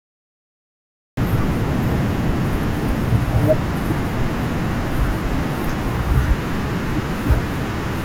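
From 0 to 1.17 s there is only digital silence, and at 1.17 s speech enters abruptly mid-sound: a cut-off start, because capture began late. The waveform shows a flat line then signal with no attack, and the spectrogram shows a sharp vertical edge.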